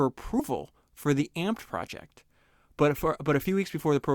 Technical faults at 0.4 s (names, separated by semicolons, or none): compressed frames skipped